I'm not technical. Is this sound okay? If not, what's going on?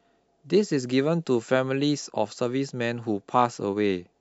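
Yes, this sound is okay, and there's nothing going on with it that needs fixing.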